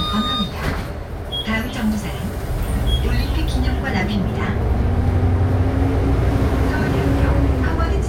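Listening through this recording of everyday sounds, nothing stood out as a technical problem.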